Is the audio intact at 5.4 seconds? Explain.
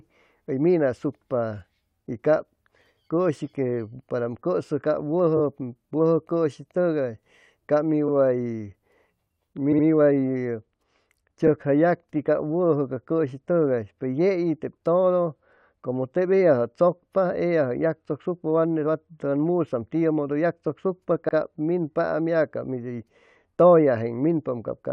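No. From 5.36 to 5.41 s there are repeated frames: a 21.3 ms block, which fits a single compressed frame, is played twice more, adding 42.7 ms. It sounds like a brief stutter, not a silent gap like a dropout.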